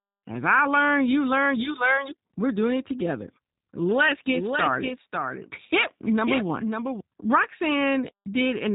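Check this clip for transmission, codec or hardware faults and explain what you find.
Two faults are present.

Throughout, the speech has passed through a G.729 codec. A low-bitrate model rebuilds the voice from a vocal filter and a few pulses, which fits an 8 kbit/s rate. Nothing above 3.8 kHz survives, and the roughness is plainly audible.

From 4.29 to 7.01 s there is a doubled audio track. The likely cause is a second, slower capture path or an out-of-step edit that mixes the same sound in again. A full-band copy a few dB quieter trails by about half a second, starting and stopping abruptly.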